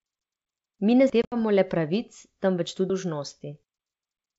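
At 1.10 s the audio jumps forward by roughly a fifth of a second. This is likely audio missing between chunks, with the sound cut every 2.0 s. On the waveform it shows as an abrupt splice with no silent gap. Right after it, between 1.22 and 1.36 s and just before "le pravic temveč", comes packet loss on an ADPCM call. About 90 ms drops out in scattered holes, the longest lasting 70 ms, which fits roughly ten lost packets. These are hard-edged silent columns on the spectrogram, and the sound resumes slightly distorted. At 2.90 s, just after "le pravic temveč", the same chunk-boundary skip recurs as another clean splice.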